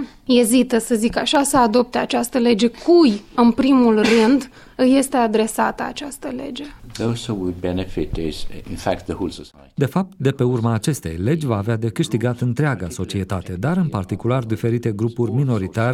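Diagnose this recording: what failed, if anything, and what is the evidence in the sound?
A loud pop at 1.35 to 1.42 s: two sharp transients in quick succession over about 70 ms, peaking around 10 dB above the surrounding programme, while the sound continues uninterrupted beneath them. That points to the analogue wiring stage, most likely a connector being disturbed or a switch contact bouncing. Each contact event injects a voltage step into the line, and the downstream circuitry shapes that step into a short thump that sits on top of the signal.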